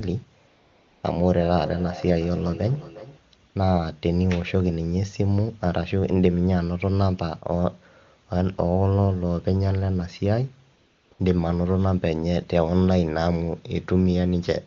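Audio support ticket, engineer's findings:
AMR comfort noise at 0.47–1.03 s, 3.49–3.55 s, 10.77–11.11 s and 11.13–11.19 s. Sender's voice activity detection declared silence and stopped speech frames (560, 60, 340 and 60 ms). Receiver synthesised background from a coarse level and spectrum estimate. Real room noise is swapped for a smooth, steady hiss that switches in and out.

Feedback echo between two devices, 1.21–3.21 s. Second device in the same room on the call; its loudspeaker output is re-captured by the other microphone. The local echo canceller does not model that path. Speech returns about every 0.4 s, each repeat thinner and more ringing, peaking at about 15 dB below the direct speech. AMR wideband (HD Voice) codec path audible as clean wideband speech at 23.85 kbit/s.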